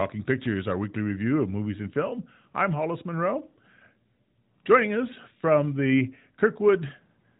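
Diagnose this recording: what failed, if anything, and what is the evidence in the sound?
Nothing stood out on listening to this speech recording; the narrowband mobile-codec band limit is audible but is part of the normal signal path rather than a failure.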